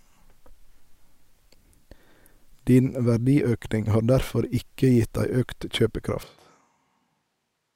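A speech recording that, at 6.23 s, abruptly turns roomy and hollow and stays that way to the end: the bass thins out, the level falls by roughly 10 dB, and background room noise rises to sit only around 25 dB below the speech. The sudden character change points to a switch to a distant microphone, most likely because the close microphone's signal dropped out and a farther pickup, such as a camera microphone, took over.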